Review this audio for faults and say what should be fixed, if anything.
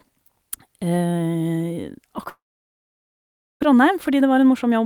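From 2.29 to 3.65 s the speech stops. A brief fading buzz follows, then near-silence for about 1.2 s, and roughly 0.78 s of audio never returns. This is a long network dropout, likely from a lengthy packet loss. On a spectrogram it shows as a smeared tail followed by an empty band. Prevention: improve link reliability or add forward error correction and redundancy.

From 3.73 s to the end, a jitter buffer speed-up plays speech about 8% faster at unchanged pitch, trimming around a tenth of a second of pitch periods to shed the delay built up after the gap. The waveform shows compressed syllable spacing with tiny splice points. Prevention: catch up more gradually, spreading the removal over a longer stretch or over pauses.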